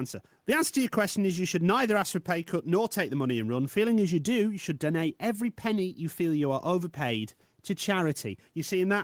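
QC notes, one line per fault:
No audible faults found in this speech clip.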